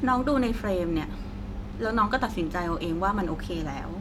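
No faults are audible anywhere in the recording; it runs without any dropout, glitch, click or distortion.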